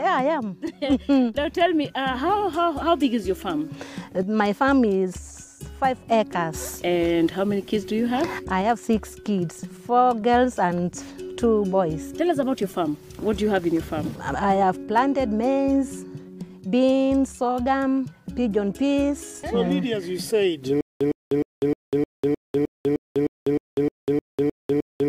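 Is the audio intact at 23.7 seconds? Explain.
No. At 23.7 seconds the clip is inside a stutter with silent gaps that runs from 20.81 s to the end. A fragment about 109 ms long plays, then about 198 ms of silence follows. This cycle repeats every 307 ms, 14 times in all. The cause is likely a stalled player or stream that replays its last fragment at each retry and then runs dry. The audio meant for this stretch is lost.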